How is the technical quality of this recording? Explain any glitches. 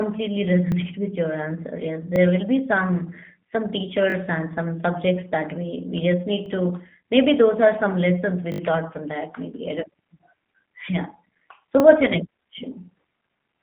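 The recording is narrowband and clearly codec-coloured, and it has six short stutters.

The G.729 codec damage runs throughout. The speech sounds thin and slightly rough, with a synthetic edge. The line band sits between about 150 Hz and 3.5 kHz, and nothing is heard above 3.8 kHz. This codec does not store the waveform. It rebuilds each short frame from a vocal tract filter, a pitch predictor and a few pulses. That modelling causes the roughness, and the narrow band fits a low-rate codec of about 8 kbit/s.

The repeated buffers fall at 0.72–0.74 s, 2.16–2.18 s, 4.1–4.14 s, 6.46–6.48 s, 8.52–8.6 s and 11.8–11.82 s. Landmarks include "will be some some" before the 4.1 s stutter and "we we just need" before 6.46 s. "what's your next" follows the one at 11.8 s. Each time, new audio arrived late, so the same fragment played again with hard joins. The timing fits a 20 ms buffer. Most repeat once. 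At 4.1 s the fragment plays twice more, and at 8.52 s four more times.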